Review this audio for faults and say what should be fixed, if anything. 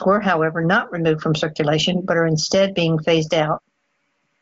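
No faults; nothing needs fixing.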